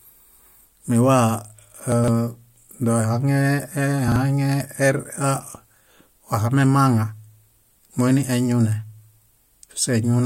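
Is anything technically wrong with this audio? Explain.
Yes. At 1.92 to 2.08 s and 4.08 to 4.16 s the speech briefly jumbles: chunks out of order, a 40 ms chunk playing three chunks, then one chunk, late.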